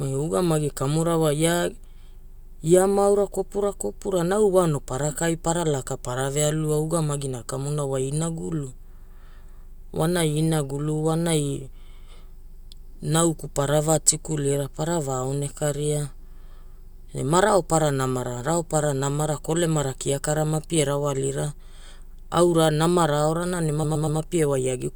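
At 23.83 s to 24.19 s the speech stutters from repeated frames: one 120 ms block, which fits a run of about six compressed frames, plays three extra times, adding 360 ms. On a spectrogram, identical 120 ms slices repeat side by side.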